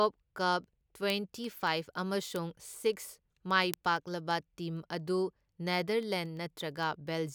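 From 0.18 s right through to 7.29 s there's a steady run of sharp ticks under the speech, about ten a second, so around seventy in all. That's word clock ticks: the receiving device is running on its own clock instead of locking to the digital link, and the two drift apart by roughly a couple of hundred parts per million. Each time they slip past each other, a single sample gets dropped or repeated.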